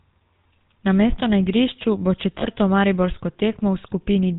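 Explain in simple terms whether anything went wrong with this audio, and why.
The whole clip went through the GSM full-rate codec, an old mobile phone system. It rebuilds the voice from a rough model and drops everything above 4 kHz. That is why the speech sounds buzzy and gravelly throughout. The damage is plain to hear.

There are also lost GSM frames. Right after "igrišču bo", from about 2.38 to 2.47 s, about 40 ms of sound never arrived. The phone system filled the gap by repeating the last good sound. You hear it as a brief rough, metallic ring.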